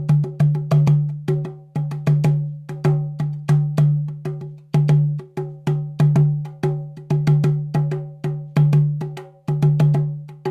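A recording of everyday sounds, and nothing is technically wrong with it.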